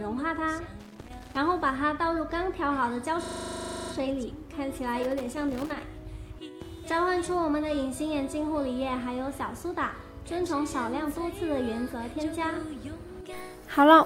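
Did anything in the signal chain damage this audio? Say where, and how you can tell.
Yes. The analogue wiring suffered loose connector crackle from 0.80 to 1.40 s and again from 4.98 to 5.81 s. A worn or dirty contact was making and breaking, chopping the signal into irregular bursts of scratching. The waveform shows ragged gaps and spikes, and the spectrogram shows scattered broadband vertical streaks.

The driver or buffer stage produced a system hang loop from 3.24 to 3.92 s. The same 40 ms slice repeats 17 times, giving a hard stutter-buzz at 25 Hz. This fits a 40 ms ring buffer cycling while the software froze. The waveform shows identical repeating blocks, and the spectrogram shows evenly spaced vertical stripes every 40 ms.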